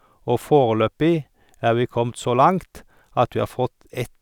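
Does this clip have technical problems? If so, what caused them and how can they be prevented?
No, nothing stood out as a technical problem when listening to this recording, so there is nothing here that needs preventing.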